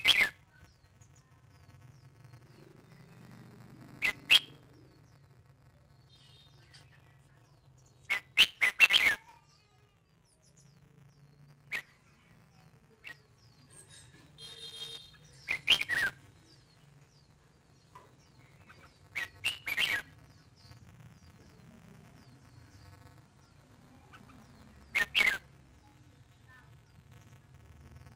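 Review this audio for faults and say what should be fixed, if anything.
Buffer tearing runs throughout as a robotic rattle at 200 Hz: writer and reader have slipped, so a small slice of every buffer replays audio about 15 ms old. Unlike dropouts, it leaves no gaps and stops in silence. Keep the write pointer safely ahead of the read position.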